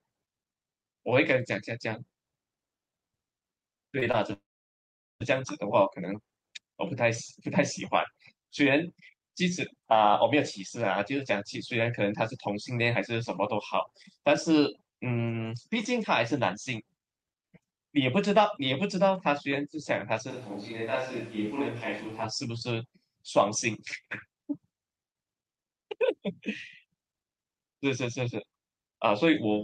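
Between 3.99 and 4.04 s, and again from 4.12 to 4.15 s, a short concealed packet loss leaves about 20 ms of audio missing each time. The decoder stretches the previous sound over each gap, producing a brief smear.

From 4.33 to 5.22 s, a long network dropout likely stopped the packets entirely. The concealed tail fades quickly into roughly 0.8 s of silence before the speech resumes.

Between 20.31 and 22.23 s, a switch to a distant microphone is the likely cause of the speech turning suddenly roomy and hollow. The level stays about the same, while background noise rises to about 25 dB below the speech.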